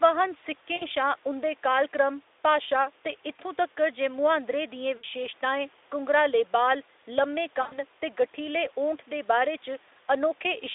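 At 0.76 to 0.87 s, 4.97 to 5.05 s and 7.61 to 7.82 s the speech suffers VoIP packet loss concealed by the speech codec. About 60 ms, 60 ms, then 100 ms of audio went missing, and the decoder filled each hole by repeating its last pitch and filter at falling gain. Unlike a hard dropout, which goes silent, each gap becomes a buzzy tone or coloured noise that fades, and the voice stays weak or smeared briefly after it returns.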